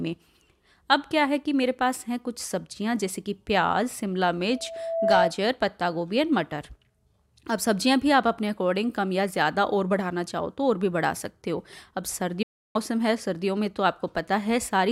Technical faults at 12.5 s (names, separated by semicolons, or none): digital broadcast dropout